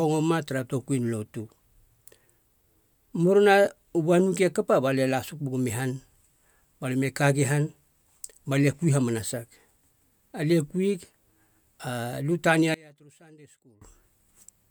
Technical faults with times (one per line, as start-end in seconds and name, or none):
12.74-13.81 one channel inverted